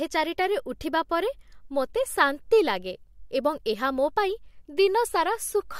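No technical faults are audible.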